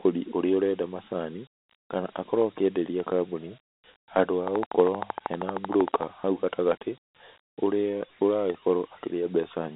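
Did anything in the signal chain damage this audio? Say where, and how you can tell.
Yes. Throughout, the sound is gritty, with a hiss trailing the speech and a narrow line band from about 200 Hz to 3.7 kHz, with nothing above 3.9 kHz. That is the codec stage: Dialogic VOX ADPCM coarsely quantising 4-bit steps, which fits 32 kbps at 8,000 samples a second.

From 4.48 to 6.04 s there is a train of clicks: about twenty evenly spaced ticks at 12.9 per second, peaking roughly 15 dB above the signal. Their much-alike shape and steady pace point to the analogue wiring or interface stage, likely interference from nearby equipment or a struggling interface injecting pulses.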